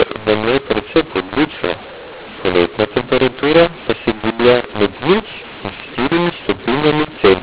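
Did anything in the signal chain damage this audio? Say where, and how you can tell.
Yes. The mu-law and A-law mix-up is at the codec decode stage, throughout. Audio coded as mu-law is decoded as A-law, so levels are scrambled and pauses fill with hiss. Plain clipping would leave silences clean, which sets it apart. The 4 kHz telephone band is intact.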